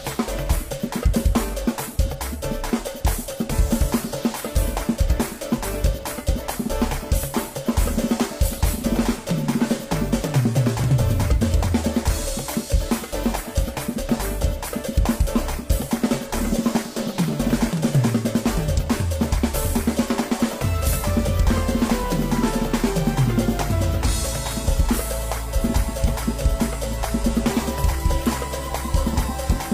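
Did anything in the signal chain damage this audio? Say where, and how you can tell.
Yes: overlap between stream segments, at 4.04 s and 16.06 s, a streaming and playback fault. Each is a tiny skip where about 31 to 35 ms of sound vanishes. The player read two segments' timestamps as overlapping and trimmed audio that was never duplicated, which fits 6-second segments.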